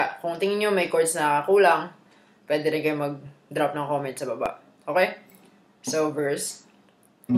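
From about 0.87 s to 6.85 s there's a regular click, roughly every 1.19 s, around seven in all. That steady spacing points to clock drift buffer slips. Two devices likely run on separate clocks about 500 ppm apart, so the buffer periodically drops or repeats a few dozen samples.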